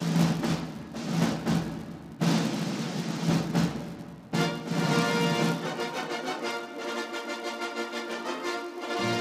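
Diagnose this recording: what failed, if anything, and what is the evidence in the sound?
The failure is a filter restarted on every block, in the buffer-based processing stage. A buzz at 200 Hz that follows the signal's level runs through the whole recording. It sounds like a rapid train of ticks fused into one tone. The mechanism is a filter that loses its memory at each block boundary. Each block starts from silence, so its first samples carry a small transient. A 200 Hz repeat rate points to blocks of 5 ms.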